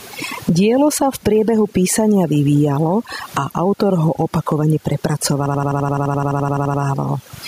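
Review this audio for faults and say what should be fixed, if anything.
Overdone noise removal, throughout: the noise reduction is set so aggressively that frequency bands near its noise estimate are pulled down to nothing, taking quiet parts of the speech with them. The background drops and breaks up into twinkling specks, even though the underlying room noise sits only about 40 dB below the speech. Use a gentler reduction amount and a more conservative noise profile.

Gain pumping, throughout: the gain swings by roughly 15 dB, squashing loud and soft parts together. The likely cause is input gain set far too high, forcing a fast limiter or compressor to clamp down repeatedly. Lower the microphone gain so the limiter rarely engages.

System hang loop, 5.46 to 6.83 s: one 85.33 ms slice of audio repeats exactly 16 times, producing a machine-gun stutter at 11.7 Hz. This happens when the system stalls while the audio hardware keeps cycling the same ring buffer, which fits a 4096-sample buffer. 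Fix the driver or system stall and add a watchdog that mutes output when buffers stop refreshing.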